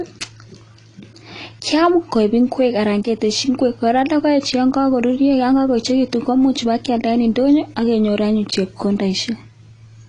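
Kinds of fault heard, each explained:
AAC compression: The whole clip sounds dull and smeared, with a warbly, fizzy edge on sibilants. That's the likely work of a low-bitrate AAC-LC encoder, at a rate that fits roughly 32 kbps, trimming the top end and coarsely quantising what's left.
Hard clipping: Peaks are pushed about 2 dB past what a stage can pass, so their tops get sliced flat and throw off high harmonics. You hear it as a crackly edge on loud moments from 1.62 to 2.66 s, plus a single tick at 3.03 s.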